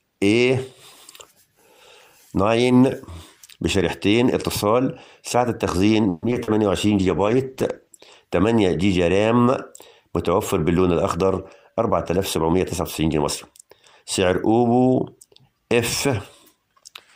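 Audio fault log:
6.09–6.60 s repeated packet loss (robotic sound): about four dropouts, the longest 130 ms, are patched by repeating earlier sound, so half this stretch is concealed and sounds choppy. The spectrogram shows smeared, repeated frames between brief empty gaps.
6.88–8.17 s call bitrate drop: the sound turns muffled and watery for about 1.2 s, which fits the encoder falling from about 48 to 14 kbps. The spectrogram's upper band goes bare and blotchy.
11.17–12.81 s jitter buffer speed-up: the audio runs about 8% fast at unchanged pitch because about 150 ms of pitch periods is trimmed. The waveform looks compressed in time while the spectrogram's harmonic spacing stays unchanged.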